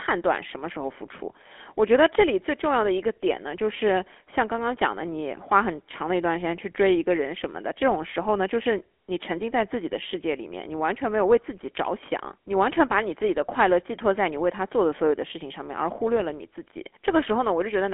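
Throughout the speech, voices sound buzzy and gravelly, thin and boxed in, with nothing below about 250 Hz or above about 3.4 kHz. That points to the GSM full-rate codec, which fits 13 kbps. It rebuilds the voice from a vocal-tract model fed with coarse, regularly spaced pulses, and that leaves plainly audible roughness.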